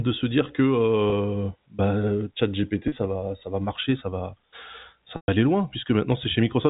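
Packet loss with pitch repetition shows up three times. At 1.10 to 1.12 s, right after "se dire", a 20 ms gap gets papered over with a repeated pitch period, a faint buzzy hold. Around 2.88 to 2.92 s, just before "va ça va marcher", 40 ms goes missing the same way. Then at 5.16 to 5.28 s, before "aller loin", a 120 ms loss runs long enough that the repetition fades to silence before speech cross-fades back in, all over the band-limited telephone sound of the G.711 coding.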